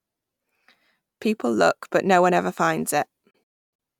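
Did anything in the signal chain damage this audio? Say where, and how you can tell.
Yes. A digital broadcast dropout in the reception stage mutes the speech between 3.30 and 3.80 s. About 352 ms is lost in several holes, the longest 288 ms, each entered with an 8 ms fade. The receiver lost the signal or rejected bad frames and muted until good frames returned, leaving flat waveform gaps and blank full-band columns on a spectrogram.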